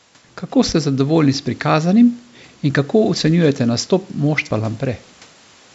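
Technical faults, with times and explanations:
No technical faults can be heard in this speech clip. It has passed through a call's microphone processing, so the lowest bass is trimmed and nothing is heard above 8 kHz, which is expected for that path.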